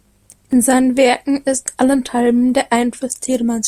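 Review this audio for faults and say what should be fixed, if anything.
A block size mismatch (truncated) from 0 to 0.53 s: one stage writes blocks, which fits 512 samples each, and the next reads fewer, discarding each tail. This produces a 150 Hz buzz, with the speech running 1.6 times fast with its timbre kept. Make both stages agree on one block size, or buffer the excess instead of dropping it.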